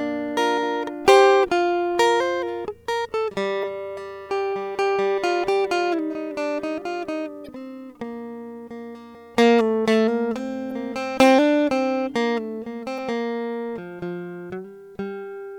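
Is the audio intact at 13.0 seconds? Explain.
No. Damaged data in the compressed music stream, from 12.95 to 12.99 s, leaves the decoder unable to read those frames, so it loses sync and hunts for the next valid frame header. That 44 ms gap comes out as a brief chirp or blip.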